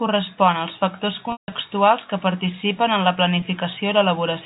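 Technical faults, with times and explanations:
1.32 to 1.52 s, packet loss with pitch repetition: about 180 ms lost across 200 ms, the longest run 160 ms, so the repeated pitch period fades to silence before speech cross-fades back, unlike a plain dropout's abrupt gap.
3.40 s, packet loss with pitch repetition: a single lost packet, about 20 ms, bridged by repeating the last pitch period, heard as a brief held buzz rather than a click or gap.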